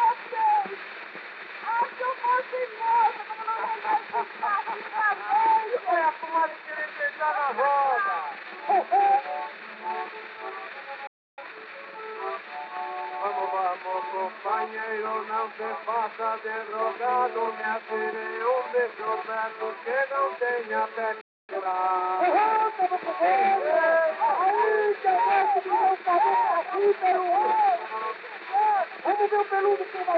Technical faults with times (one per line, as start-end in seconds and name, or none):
11.07-11.38 playback stall
11.38-11.98 time-compressed catch-up
21.21-21.49 playback stall
21.49-21.75 time-compressed catch-up